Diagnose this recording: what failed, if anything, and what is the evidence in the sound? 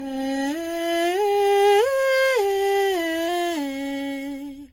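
Codec stage: generation loss, likely from around seven low-bitrate AAC passes, leaves the music swirly and hollow, with smeared attacks and nothing above 16.6 kHz.

Buffer stage: a drift correction step likely raised the playback rate by 5.34% at 3.28 s, lifting pitch 90 cents, nearly a semitone, until the end.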